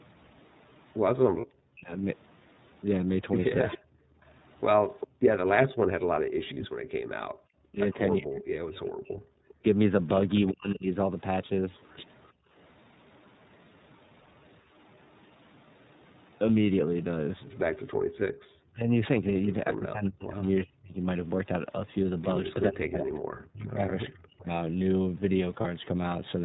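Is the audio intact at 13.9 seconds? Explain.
No. The moment sits inside a stretch of background gated by the echo canceller, from 12.32 to 14.74 s. The canceller clamped the microphone while the far-end loudspeaker played. The room sound dips by about 32 dB, in brief drops adding up to roughly a third of a second, then returns.

The iLBC codec is also heard here, as throughout. Each frame's excitation is coded on its own, and the roughness fits 30 ms frames at about 13 kbps. Nothing above 4 kHz survives, and the damage is plainly audible, the speech a little rough and synthetic.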